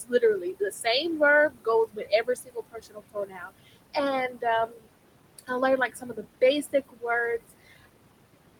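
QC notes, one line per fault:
Throughout: noise suppressor artifacts. The suppressor pulls down the bands it judges to be steady noise by about 21 dB, working frame by frame, so the room noise, sitting about 13 dB below the speech, sinks in the gaps and swells back under each phrase. A spectrogram shows the noise floor pumping in time with the speech, with speckled, isolated time-frequency blobs in the pauses.
0.04–0.86 s, 1.49–3.96 s, 4.29–4.87 s, 5.89–7.04 s, 7.38–7.86 s: speech cut by the noise suppressor. In each span the suppressor mistakes quieter parts of the speech for noise and turns them down with the background, by about 18 to 21 dB at the deepest. Soft consonants and word endings come out swallowed or faint. The longest span, 1.49–3.96 s, loses roughly a second and a half in total. On a waveform the envelope drops abruptly mid-phrase, and the spectrogram shows speech energy gapped or smeared away in those frames.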